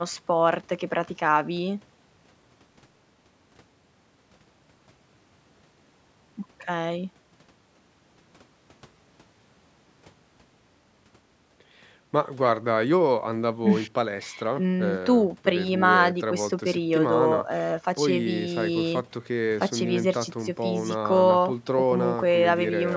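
No technical faults can be heard anywhere in this speech clip. The call microphone processing is audible as expected, with the lowest bass trimmed away by its high-pass filter and nothing present above 8 kHz.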